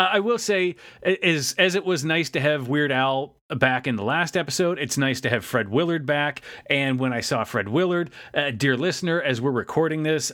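No technical faults are audible.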